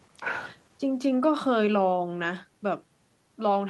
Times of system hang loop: none

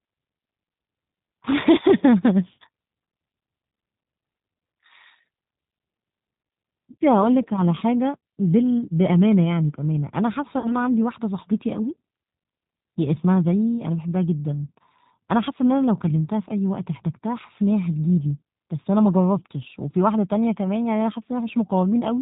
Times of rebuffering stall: none

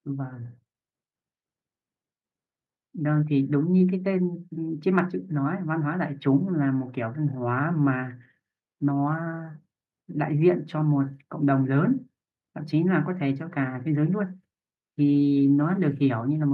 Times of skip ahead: none

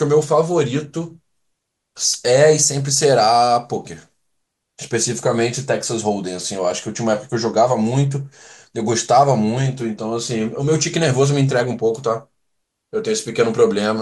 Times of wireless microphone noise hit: 2.12-2.16

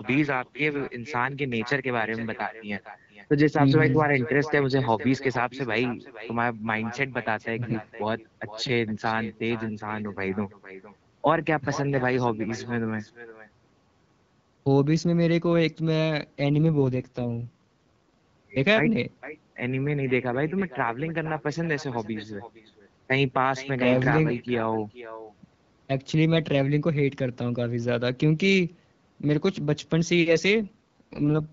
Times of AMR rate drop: 16.50-17.51, 30.57-31.52

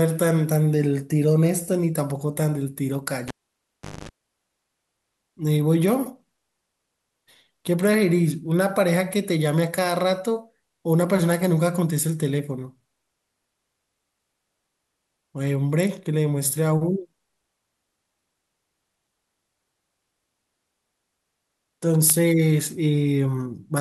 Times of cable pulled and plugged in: 3.28-4.09

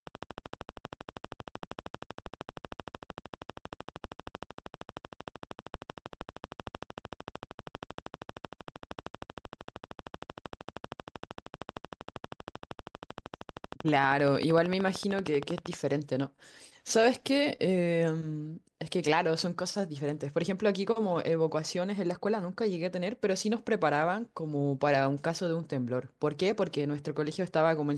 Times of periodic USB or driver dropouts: none

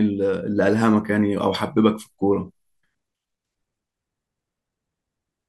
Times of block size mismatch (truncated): none

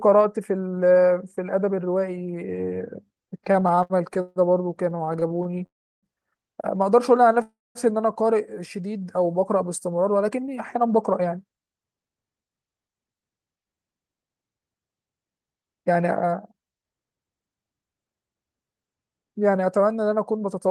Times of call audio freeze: 5.66-6.06, 7.42-7.78

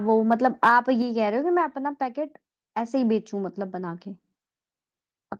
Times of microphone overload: 0.31-0.76

